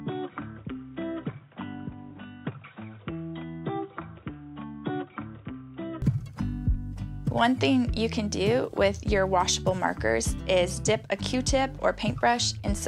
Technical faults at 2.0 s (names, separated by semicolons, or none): input switched to a poorer device